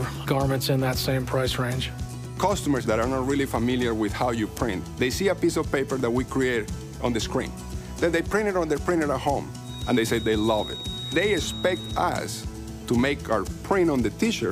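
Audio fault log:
9.60 to 12.10 s, feedback whistle: a thin, steady tone near 3.8 kHz sits behind the sound for about two and a half seconds, roughly 15 dB below it, swelling and fading slowly in level before it stops. The likely cause is a loudspeaker-to-microphone loop held just at the edge of feedback, where gain at that one frequency is high enough to keep ringing but never high enough to grow into a runaway howl.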